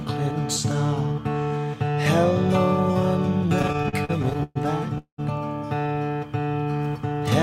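From 3.59 to 4.57 s the music catches and hitches over and over. Fourteen short breaks, the longest 122 ms, are covered by drawn-out or fading continuations of the preceding sound, filling about a third of that second. These are repeated stalls (stutter): packets kept arriving late or slower than playback, so the jitter buffer kept running dry and the receiver bridged each wait. Nothing is lost, about 0.32 s is inserted, and the passage drags.

At 4.98 s the music stops for about 0.2 s. The last sound is held and fades, and roughly 110 ms of that is silence before playback resumes at 5.20 s exactly where it left off. This is a call audio freeze, likely caused by packets held up in transit that emptied the buffer. The stall pushes everything after it about 0.2 s later than it would otherwise play, and none of the music is lost.

From 6.09 to 7.22 s the music plays slower at unchanged pitch, with sustained sounds stretched. 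This is a jitter buffer slow-down: to rebuild its reserve, the receiver repeated single pitch periods and fragments many times in succession, adding about 143 ms so that the passage runs at roughly 88% of normal speed.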